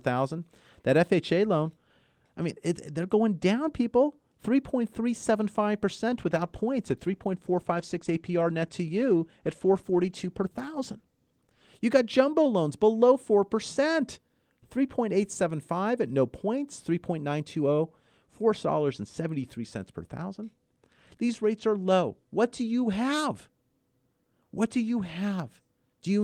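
In this speech clip, a call bitrate drop from 6.1 to 11.73 s, consistent with roughly 32 falling to 14 kbps, makes the encoder code coarsely, sounding rough and muffled with highs cut above 12 kHz.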